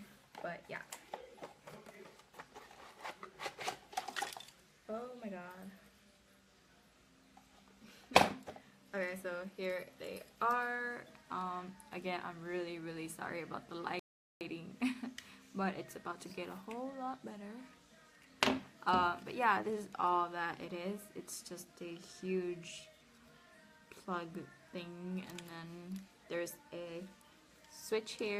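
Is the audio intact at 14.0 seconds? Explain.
No, not quite. At 14.0 s you're right at the start of a rebuffering stall running from 13.99 to 14.41 s. The player ran out of downloaded audio, so the sound drops to silence for about 0.42 s while it waits for more data, then picks up exactly where it stopped. Nothing actually goes missing from the material, but that moment is dead air and the clip runs that much longer.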